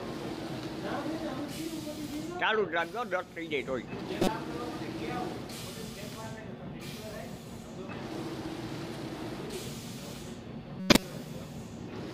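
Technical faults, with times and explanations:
4.21–4.28 s and 10.80–11.03 s, corrupt frame decoded. Each burst is a short chirpy, noisy squeak that does not belong to the sound around it. Flipped bits damaged a few compressed frames, and the decoder played them anyway. Misread gains and codes put energy at the wrong frequencies for as long as the bad frames last. The first burst is brief and peaks around -15 dBFS. The second spans more frames, lasts longer, and is much louder, near -5 dBFS.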